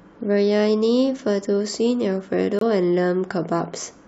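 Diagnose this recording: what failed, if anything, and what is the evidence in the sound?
Codec: corrupt frame muted, 2.59 to 2.63 s. The decoder rejected damaged frames and substituted silence, fitting two frame lengths, leaving an abrupt flat waveform gap and a blank spectrogram column.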